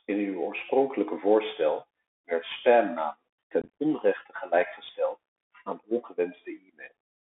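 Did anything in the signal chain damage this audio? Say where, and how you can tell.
Yes. The damage sits at the codec stage throughout. This is a Bluetooth CVSD headset codec: the speech is confined to roughly 250 Hz to 3.5 kHz, consistent with a 64 kbit/s CVSD link. On a spectrogram everything above 3.5 kHz is empty, with a granular noise floor across the passband. The delta modulator's adaptive step can't keep up with fast, loud high-frequency content, so sibilants come out scratchy and a hiss sits beneath the voice.

Between the headset and the host there is unconcealed Bluetooth headset packet loss. From 3.62 to 3.69 s, just before "onrechte gelijkgesteld aan", dozens of short voice packets drop out. That adds up to about 97.5 ms of missing audio spread across 172.5 ms, and the longest single gap is 22.5 ms. A second, brief loss of a couple of packets (7.5 ms) falls at 5.83 s, just after "onrechte gelijkgesteld aan". 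The waveform shows flat or idle stretches with sharp edges. These are heard as crackle, chop and a momentary dip in level as the CVSD decoder recovers.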